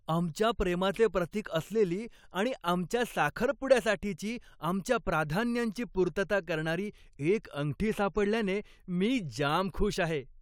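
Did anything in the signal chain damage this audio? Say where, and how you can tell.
No, nothing along the chain from capture to playback has left an audible mark on this speech recording.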